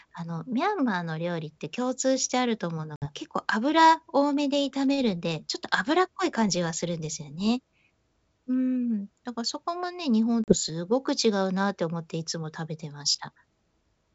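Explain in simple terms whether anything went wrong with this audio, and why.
Two short gaps stand out, at 2.96 s and 10.44 s. That's packet loss on an ADPCM call. Chunks of the call never arrived, about three at the first spot and about two at the second, and each was filled with dead silence. The decoder also lost track of the sender, so the speech comes back with a bit of roughness. It settles within a few tens of milliseconds. The wideband phone coding itself sounds clean.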